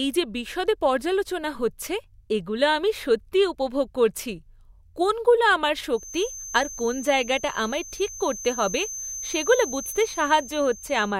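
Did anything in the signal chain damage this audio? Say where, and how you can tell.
Yes. From 5.89 s, just after "কোনগুলো আমার", a feedback whistle at 6.2 kHz runs to the end, about 15 dB below the speech. Likely cause: an acoustic loop from loudspeaker to microphone held just at the edge of feedback. A spectrogram shows one thin, steady horizontal line, swelling and fading slowly in level.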